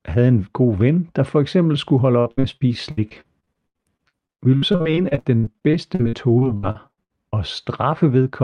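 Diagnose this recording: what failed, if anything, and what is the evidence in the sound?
From 2.19 to 7.34 s the speech turns choppy and robotic. This is repeated packet loss across the network: about 40 gaps, the longest 77 ms, each patched by stretching the preceding sound.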